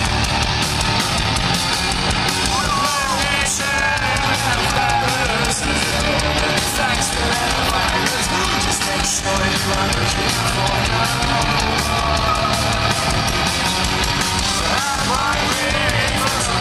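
At 4.70 to 4.78 s the sound briefly jumbles, and a shorter scramble follows at 9.98 to 10.02 s. Both are chunks out of order: 20 ms blocks of audio played back in the wrong sequence. In the first, one block arrives three blocks late. In the second, it is one block late. Nothing is missing, but each misplaced block creates three hard joins.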